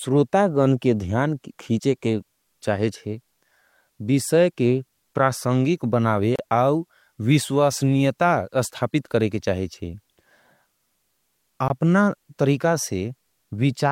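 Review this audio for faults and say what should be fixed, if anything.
Two gaps at a join of encoded pieces interrupt the speech: 31 ms from 6.36 to 6.39 s, and 19 ms at 11.68 s. Separately encoded segments were joined untrimmed, so encoder start delay and final-frame padding remain as silence. The waveform drops to silence with softened edges; a spectrogram shows a thin, smeared, full-band vertical blank.

Trim each segment's encoder delay and padding using gapless metadata before joining, or encode the whole programme in one pass.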